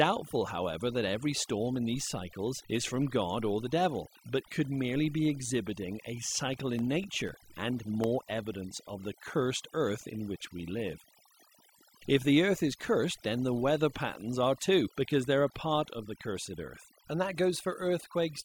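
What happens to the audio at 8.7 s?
At 8.7 s the speech is inside a run of periodic USB or driver dropouts lasting from 6.54 s, just after "merely be exhibiting a", to 9.54 s, just before "earth in which we". Every 0.25 s something stalls the audio path and roughly a millisecond of signal is replaced by silence. Around fifteen of these gaps fall in the span, heard as evenly spaced ticks riding on the voice.

Throughout the clip, including at this moment, overdone noise removal is also present. The noise reduction pulls frequency bands near its noise estimate far down, removing quieter parts of the voice along with the background. The result is near-silent gaps with twinkling specks.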